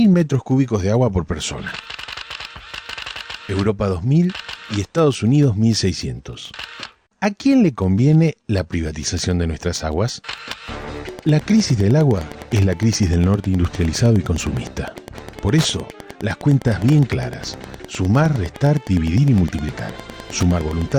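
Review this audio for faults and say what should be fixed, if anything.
Wi-Fi interference runs from 11.01 s to the end: a steady tick every 102.4 ms, roughly ten per second, about 20 dB below the signal. A nearby Wi-Fi radio's beacon bursts are rectified by the audio circuit and appear as clicks. Keep Wi-Fi devices away from the audio chain and use shielded, properly grounded cabling.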